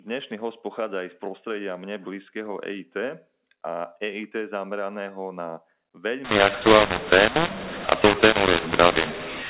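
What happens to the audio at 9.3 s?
At 9.3 s the speech is inside a mu-law and A-law mix-up that runs from 6.25 s to the end of the clip at 9.49 s. The telephone audio was coded as mu-law but decoded as A-law, so levels are mapped to the wrong steps. Some come out too loud, others too quiet, and the quietest samples rise well above silence. The result is harsh, distorted speech that likely stays fairly understandable, with pauses filled by noise. Ordinary clipping only damages the loudest peaks, but here the quiet stretches are spoiled too. Underneath, the band still stops at 4 kHz from the 8 kHz telephone coding.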